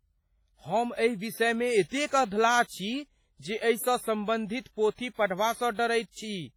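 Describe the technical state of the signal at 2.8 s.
At 2.8 s, as throughout, the speech rings and washes with hiss that breathes with it: heavy, likely WMA compression, fitting about 24 kbps. Long transform blocks smear noise more widely than MP3.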